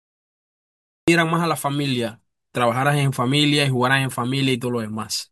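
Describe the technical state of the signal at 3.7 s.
At 3.7 s the speech signal is intact, with no audible fault at that moment.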